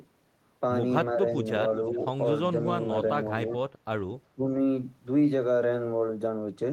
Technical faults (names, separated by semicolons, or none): speech suppressed in double talk; echo leak